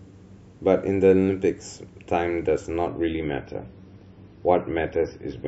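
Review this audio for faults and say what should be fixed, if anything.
At 2.88 s the speech suddenly loses its top end and stays dull to the end of the clip. This is an adaptive stream at a lower bitrate. The connection slowed, and the player switched versions without a gap. Nothing is left above 6 kHz. Smearing and swirly codec artefacts rise. The sound fits a drop from a 128 kbit/s MP3 to a 24 kbit/s one. To prevent it, buffer more ahead or set a higher minimum bitrate for the stream.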